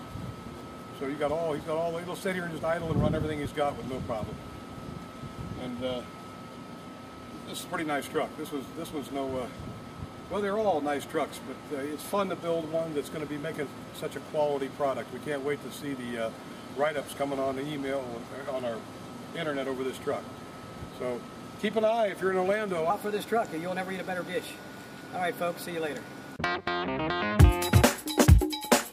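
The audio has a section at the wrong speed from 22.90 s to the end. From that point it plays 1.13 times faster, so everything becomes hurried and sits about two semitones higher. The likely cause is an editor or player running that segment against the wrong clock. Tempo and pitch rise together, which is what separates it from a pitch shift or time-stretch, where one changes and the other is preserved.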